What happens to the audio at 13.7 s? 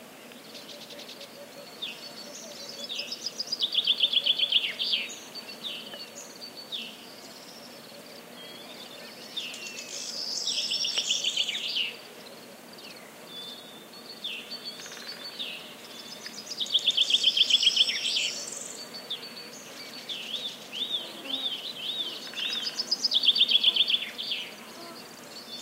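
Nothing goes wrong at 13.7 s; the sound continues intact through that moment with no audible dropout, glitch or distortion.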